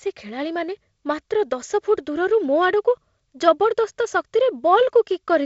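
There are no technical faults in this speech to describe in time order.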